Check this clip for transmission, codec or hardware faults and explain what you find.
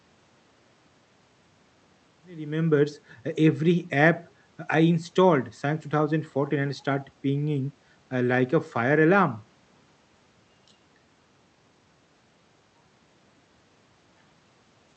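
No transmission, codec or hardware faults can be heard: the speech fades in smoothly from around 2 s to full level at 3.01 s, and the call codec's bandwidth, which sounds like Opus, tops out near 8 kHz as that route normally does.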